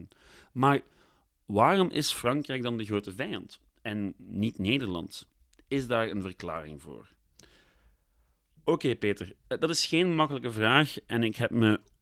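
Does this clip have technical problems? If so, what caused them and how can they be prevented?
No, no technical faults present.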